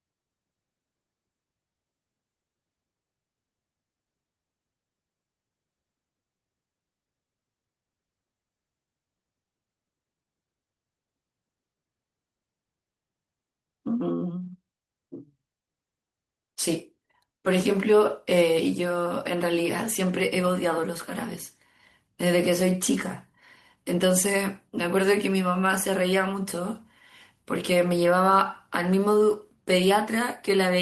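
No technical faults are audible.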